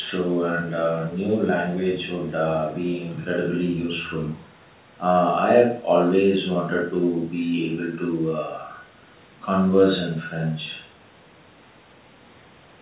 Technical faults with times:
none

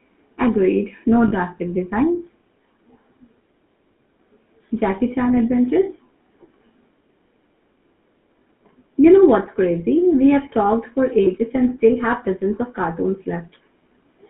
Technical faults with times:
0.00-14.30 GSM full-rate codec
1.28-1.33 lost GSM frames
11.24-11.27 lost GSM frames

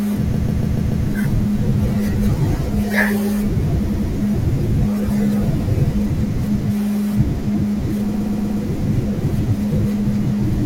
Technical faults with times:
0.34-1.06 repeated frames
3.89-4.08 repeated frames
8.14-8.62 repeated frames

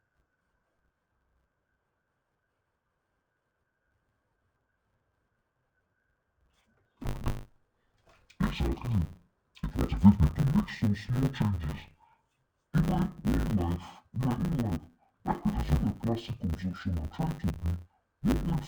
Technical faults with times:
0.00-18.68 interleaved audio read as planar

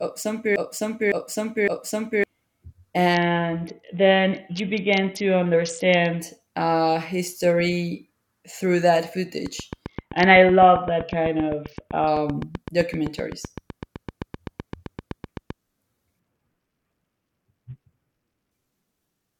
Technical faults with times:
0.00-2.24 broken-record loop
3.14-6.20 Bluetooth SBC bit pool drop
9.46-15.51 train of clicks
9.86-12.07 Bluetooth SBC bit pool drop
16.19-18.51 Bluetooth SBC bit pool drop

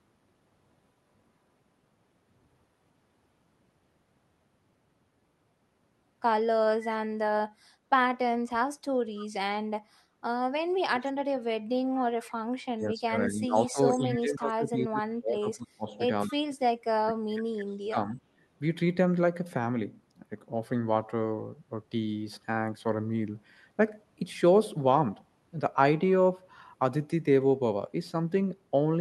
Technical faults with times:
6.82-6.96 echo leak
7.10-7.40 speech suppressed in double talk
8.47-9.27 echo leak
10.94-12.33 echo leak
12.40-12.44 background gated by the echo canceller
12.72-18.20 speech suppressed in double talk
14.10-14.18 echo leak
16.26-16.33 echo leak

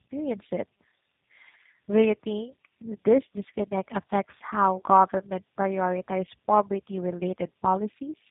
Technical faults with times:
0.00-8.30 tandem speech coding

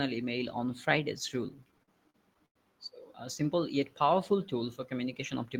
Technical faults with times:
1.49-2.57 repeated stalls (stutter)

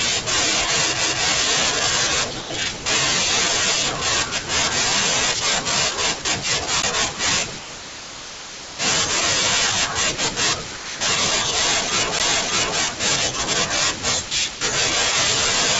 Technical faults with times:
1.01 CD skip
2.41-2.50 sound dropped by the voice detector
2.77-2.86 sound dropped by the voice detector
6.22-6.25 sound dropped by the voice detector
6.82 CD skip
7.59-8.79 sound dropped by the voice detector
10.77-11.01 sound dropped by the voice detector
12.19 CD skip
14.28-14.61 sound dropped by the voice detector

